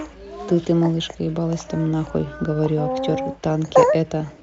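No technical faults are audible.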